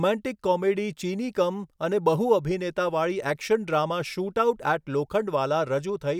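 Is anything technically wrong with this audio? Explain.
No, nothing technically wrong can be heard here.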